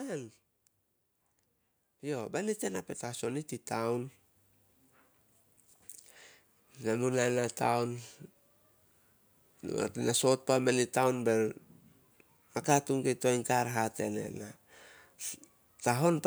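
From 2.01 to 4.21 s, automatic gain rising lifts the speech and background together by about 9 dB over 2.2 s, as the gain control judges the input too quiet. The waveform envelope and noise floor climb steadily; the spectrogram brightens evenly across all frequencies.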